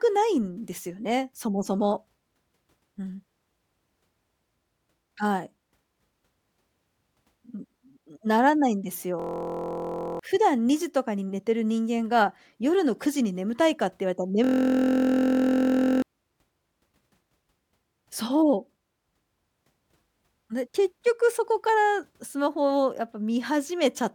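Speech twice freezes into a steady buzz at about 43 Hz, from 9.20 to 10.19 s and from 14.44 to 16.02 s, losing roughly a second and a second and a half of audio. It is a system hang loop: the driver stalled while the hardware replayed one 23.2 ms ring-buffer segment, which fits a 1024-sample buffer.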